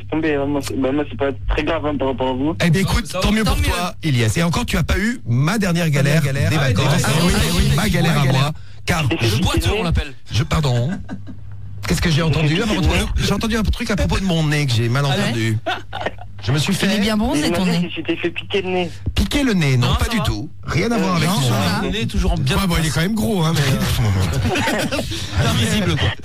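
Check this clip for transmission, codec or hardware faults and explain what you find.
There is one fault, a doubled audio track, from 5.96 to 8.48 s. For that stretch the sound is heard twice. A second full-band copy trails the original by about 300 ms, some 5 dB quieter. It carries no decay or room colour. It cuts in and out abruptly at both ends. The likely cause is the same signal reaching the mix a second time by a slower route, so two copies play out of step.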